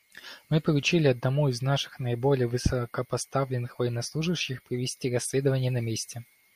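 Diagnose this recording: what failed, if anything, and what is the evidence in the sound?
Nothing stood out on listening to this speech recording that would point to a failure at any stage of the chain.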